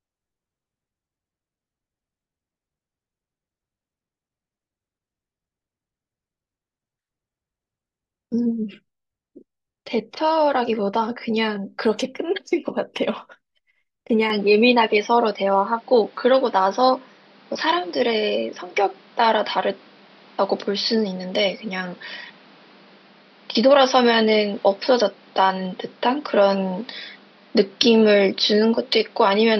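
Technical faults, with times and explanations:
14.3–29.6 s, input switched to a poorer device: speech turns dull with no gap, likely another microphone; the spectrogram is empty above 5.8 kHz, and a new noise floor appears roughly 30 dB down.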